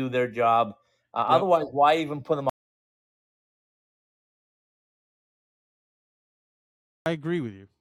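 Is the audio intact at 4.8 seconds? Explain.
No. At 4.8 seconds the speech has stopped completely: an audio dropout to silence runs from 2.50 to 7.06 s, about 4.57 s of silence with no room tone. The input was likely lost, through a disconnected device, failed link or mute, while recording continued.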